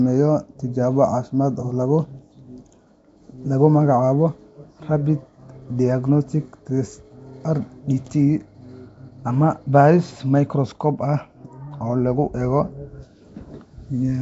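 From start to finish the speech carries a rough, hissy halo and a smeared, underwater quality, with nothing above 7.7 kHz. The damage is plainly audible and points most likely to Nellymoser compression, the old Flash microphone codec, at a rate that fits about 32 kbps. It codes short blocks with a fixed, small bit budget. Weaker bands receive no bits and are filled with noise, which produces the grainy halo and blurred detail.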